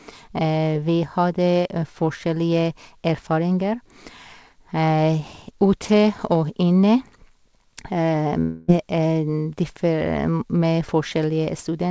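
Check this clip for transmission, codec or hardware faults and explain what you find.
There's one fault worth flagging: a long network dropout from 8.40 to 8.71 s. For about 0.3 s the speech smears into a buzzy, fading continuation of the last sound, then resumes with roughly 0.28 s missing. That's likely packets failing to arrive while the receiver filled the gap. The lack of anything above 8 kHz is just the call codec, consistent with G.722 at 64 kbps, not a fault.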